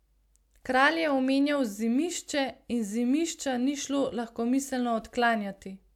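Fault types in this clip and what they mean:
No faults can be heard.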